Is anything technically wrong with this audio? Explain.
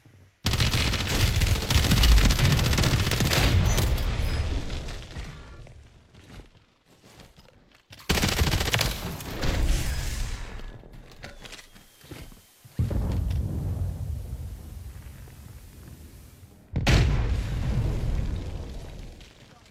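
Yes. From 11.47 s to 16.76 s the audio shows digital radio blending to analogue: the receiver loses its digital stream and cross-fades over about 484 ms to the station's FM broadcast, then returns. During that stretch a steady hiss rises to roughly 30 dB below the signal. The level stays matched, so the change is heard as added noise rather than a jump in loudness.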